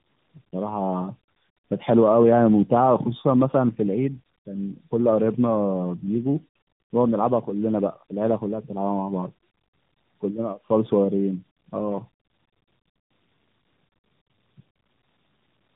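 Throughout the speech there is tandem speech coding. It sounds rough, muffled and warbly, which points to about three speech codecs in a row, likely AMR-NB among them, each re-coding the last one's damage. A spectrogram shows nothing above 3.8 kHz and smeared, wavering formant bands.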